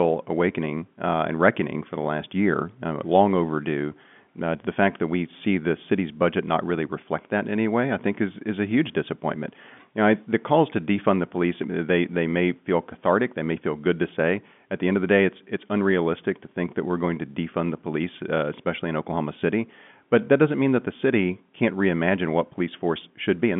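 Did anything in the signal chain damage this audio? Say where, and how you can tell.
No, nothing in the signal chain damaged this speech; it carries the narrow band of a G.711 telephone line, with nothing above about 3.7 kHz, and that is the format working as intended.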